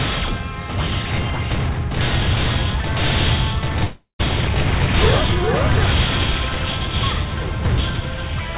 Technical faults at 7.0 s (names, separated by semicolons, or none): none